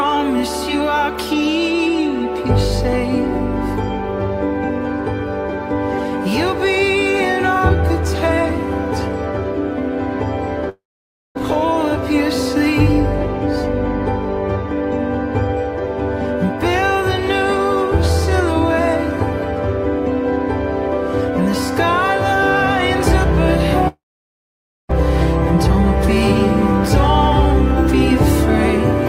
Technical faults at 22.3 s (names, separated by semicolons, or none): none